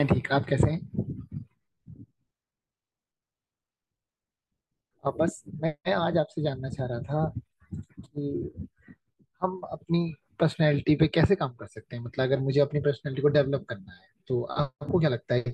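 Nothing in this bit of speech stands out as a fault, so there's nothing to flag anywhere along the way.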